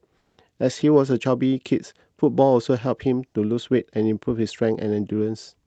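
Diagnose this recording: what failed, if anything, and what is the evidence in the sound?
Comfort noise in place of the background, at the call-processing stage. From 0.17 to 0.37 s, 200 ms of the real background becomes a steady, featureless hiss, about 8 dB quieter. Opus discontinuous transmission likely stopped sending, and the receiver filled the gap with synthetic noise.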